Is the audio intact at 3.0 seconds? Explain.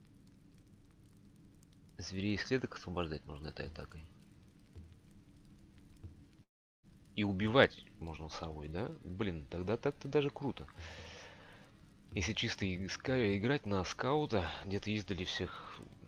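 Yes, at 3.0 seconds the audio plays through cleanly, with no dropout, click, distortion or other break in the signal.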